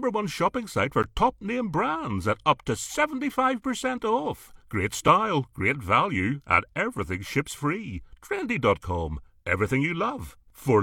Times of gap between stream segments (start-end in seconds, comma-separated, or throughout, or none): 1.02, 5.08